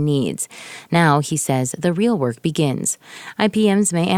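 No technical faults are audible.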